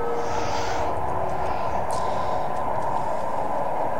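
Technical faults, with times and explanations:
No technical faults can be heard in this clip.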